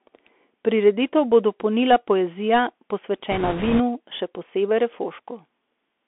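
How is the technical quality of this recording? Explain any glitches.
The recording has poor technical quality. It is narrowband headset speech with a burst of crackle near the middle.

Throughout, the speech passes through the Bluetooth CVSD headset codec. Only about 250 Hz to 3.5 kHz survives. The one-bit encoder's adaptive step can't keep up with fast, loud changes. S sounds turn scratchy. A granular hiss sits under the speech. The damage is plainly audible.

From 3.32 to 3.81 s, just before "še posebej", there are bit errors on a Bluetooth voice link. Roughly 7 percent of bits are flipped. Each bit carries little weight, so there are no sharp clicks. Instead, a rushing, crackly noise covers that half-second.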